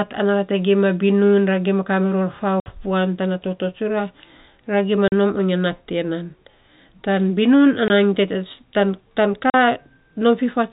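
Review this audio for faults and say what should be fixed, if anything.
The speech drops out four times with packet loss filled with silence: 2.60–2.66 s, right after "binun ra gima kariror" and before "puan tana toto"; 5.08–5.12 s, just after "ra gima"; 7.88–7.90 s; and 9.50–9.54 s. The gaps last 60, 40, 20 and 40 ms. Each is a multiple of 20 ms, which fits 20 ms packets going missing. The receiver played silence in their place, so the sound stops abruptly and restarts with hard edges. On a waveform each gap is a flat line with vertical edges. On a spectrogram it is a blank vertical stripe across the whole band, which tops out at 4 kHz from the G.711 telephone coding. To prevent it, add a jitter buffer with forward error correction or packet-loss concealment, so lost packets are rebuilt or smoothly interpolated instead of replaced with silence.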